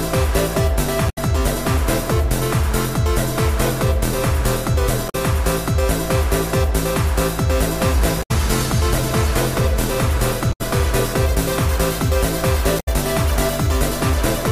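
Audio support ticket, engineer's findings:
Damaged data in the compressed stream. Short chirps, squawks, clicks or holes, roughly 0.1 s each, at 1.06, 5.06, 8.19, 10.49 and 12.76 s. Corrupt or missing bytes in the stream. Decoder misreads those frames, loses sync, resyncs at the next valid header.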